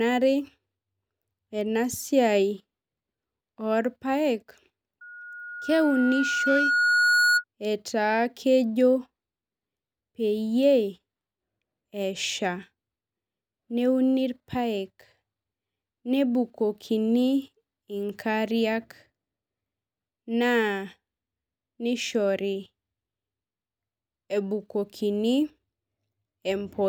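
A speech clip with loudspeaker feedback squeal from 5.01 to 7.44 s: a single 1.4 kHz tone swelling over about two seconds to roughly 5 dB above the voice. That slow self-sustaining build at one pitch marks a mic-speaker loop, not a steady interference whine.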